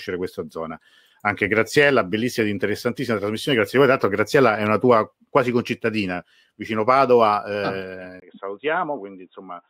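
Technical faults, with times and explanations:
8.2–9.7 s, input switched to a poorer device: after a 20 ms gap at 8.2 s, the speech turns dull and boxy to the end, with nothing above 3.8 kHz, a few decibels quieter, and a new noise floor far below the speech. The recording has likely jumped to a narrower-band microphone or headset call profile. Unlike a codec simply dropping its bandwidth, the level, tone and background noise all change together at one abrupt switch point.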